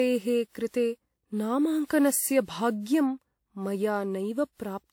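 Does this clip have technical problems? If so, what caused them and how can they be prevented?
Yes. Generation loss runs through the whole speech clip. It sounds swirly, smeared and hollow, with blurred attacks. The likely cause is about four rounds of lossy encoding, which fits a WMA-type codec near 96 kbit/s. Each pass requantises on a shifted frame grid, so noise and spectral holes build up. To prevent it, keep a lossless master and encode only once, at the final step.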